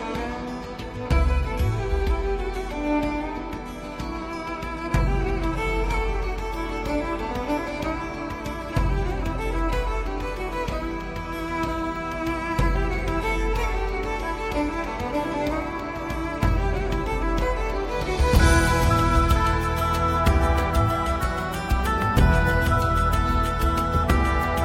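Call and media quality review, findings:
Adaptive stream starting at a low bitrate, 0.0–6.0 s: smeared, synthetic-sounding treble, then a sudden clean step up at 6.0 s with no gap. Fits HE-AAC near 24 kbit/s switching to AAC-LC near 96 kbit/s. Unlike packet loss or a downswitch: a single upward change, no dropout.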